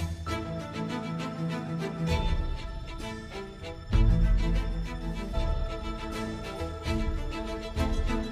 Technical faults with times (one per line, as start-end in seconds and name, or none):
4.37-4.42 compressed frames skipped
5.30-5.35 compressed frames skipped
6.55-6.61 compressed frames skipped